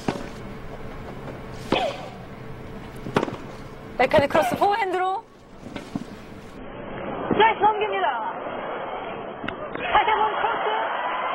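At 6.57 s the audio drops abruptly, with no gap, to an adaptive stream at a lower bitrate. Nothing remains above 3.8 kHz through the end.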